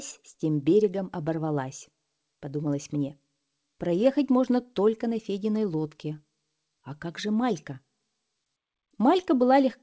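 No technical faults can be heard anywhere in the clip. It has come through a working WebRTC call path, and nothing is heard above 8 kHz, which fits the wideband G.722 codec.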